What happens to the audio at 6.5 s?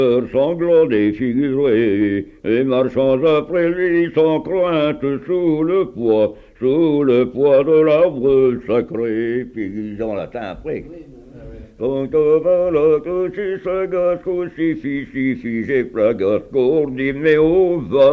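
Nothing goes wrong at 6.5 s: the audio carries on intact there, with no dropout, click, distortion or other fault.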